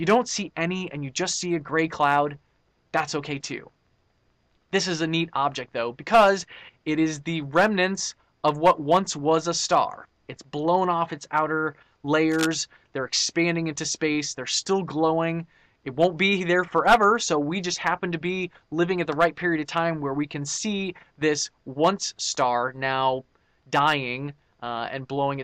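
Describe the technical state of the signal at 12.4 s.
At 12.4 s you're in the middle of a burst of cable scratch noise, running from 12.31 to 12.46 s. It's a dense, ragged rustle sitting roughly 10 dB under the sound, most likely a worn cable or connector being moved so its contact resistance jumps around.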